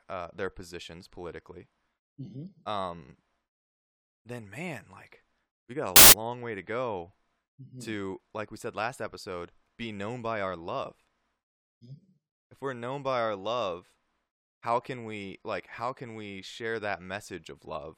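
At 5.96 s the speech is cut by a burst of very loud white noise lasting about 0.16 s, ending just before "long way to go". It is a case of file tags played as audio: an embedded cover picture, stored as compressed data, was decoded as if it were samples. Unlike clipping or a codec glitch, the static bears no relation to the surrounding sound and starts and stops with hard, instantaneous edges.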